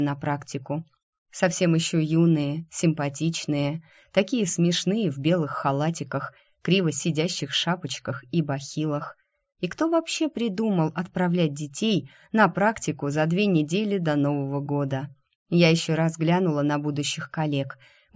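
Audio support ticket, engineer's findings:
Engineer's findings: no audible fault found in this audio.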